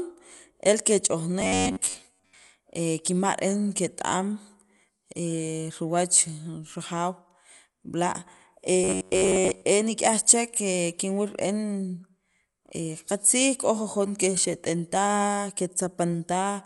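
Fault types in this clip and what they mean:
Dolby Digital compression: The speech sounds dull, with nothing above 11.5 kHz and rough, fluttering noise around tones. This likely comes from low-bitrate coding, perhaps 64 kbps.
Robotic sound from repeated short buffers: Twice the speech becomes a metallic buzz near 93.8 Hz. It likely comes from replaying about 10.7 ms snippets in place of most real audio.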